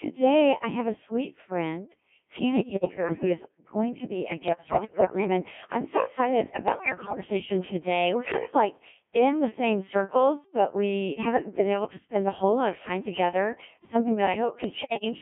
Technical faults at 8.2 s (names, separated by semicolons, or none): Codec 2 vocoder